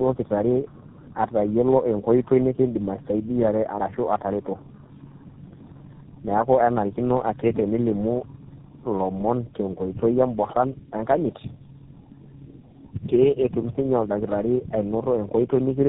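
From start to finish this is tandem speech coding: the roughness, muffling and warble fit three low-rate speech codecs in a row, plausibly G.729A, iLBC and GSM full rate, each re-encoding the previous one's damage. Nothing comes through above 3.8 kHz.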